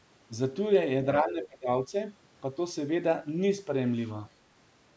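From 1.22 to 1.7 s the speech sinks sharply, by around 25 dB at its deepest, for about half a second. This is speech suppressed in double talk: the echo canceller likely mistook the talker for loudspeaker echo while both sides spoke, and turned everything down.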